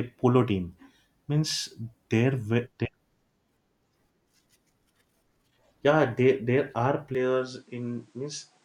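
At 7.15 s the input likely switched to a poorer device; speech then lacks anything above 10 kHz, sounds slightly quieter and carries faint new noise.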